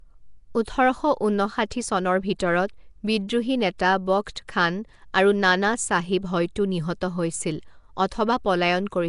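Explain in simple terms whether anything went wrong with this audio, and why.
Something did go wrong, and it lasts the whole clip. The speech has a rough, hissy halo and sounds smeared, as if underwater. Nothing is heard above 10.6 kHz. The likely cause is Nellymoser compression, which squeezes sound hard and fills weak frequency bands with noise.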